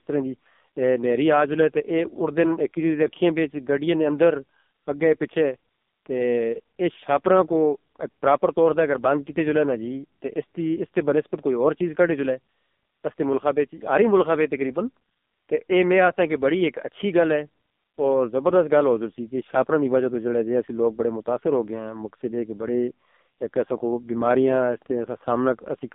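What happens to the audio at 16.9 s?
The speech at 16.9 s, like the whole clip, went through the AMR narrowband mobile codec at what sounds like its lowest modes, around 5 kbps, leaving buzzy, synthetic speech confined to 200 Hz–3.6 kHz.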